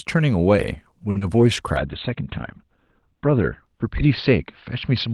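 Around 1.10 to 1.16 s there's a short stall from a late packet: the buffer ran dry, so the sound gets held about 50 ms too long with a slight buzz or dip, and nothing is lost. Right after, at 1.18 to 1.22 s, comes a short concealed packet loss, where roughly 30 ms never arrived and the gap was patched over, so you hear a quick smear or wobble. From 1.77 s to the end there's a call bitrate drop. The sound turns rough and muffled as the top end falls from 20 kHz to about 4 kHz, which fits the encoder dropping from around 32 to 10 kbps, and it stays at its worst for about 1.4 s.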